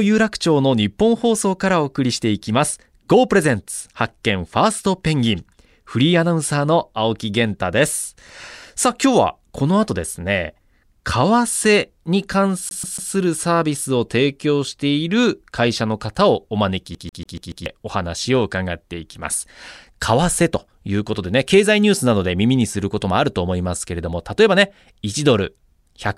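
A speech clip with two episodes of a CD stuck on one turn. From 12.69 to 13.12 s a fragment of about 142 ms repeats three times, and from 16.95 to 17.66 s the same length of fragment repeats five times. A scratch keeps throwing the pickup back one track, so the loop plays again with a brief mute at each jump. On a waveform the identical block shows as a regular tiling. On a spectrogram the pattern repeats at that steady interval with thin vertical gaps.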